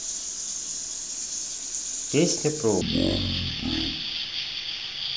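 At 2.81 s the speech suddenly slows to half speed and drops an octave, 12 semitones, staying that way to the end of the clip. This is stereo read as mono: left and right samples that alternate in the stream are played back in sequence as one channel, so every frame lasts twice as long. On a spectrogram the harmonics fall to half their height, a fainter mirrored copy fills the upper half, and waveform syllables stretch to double length.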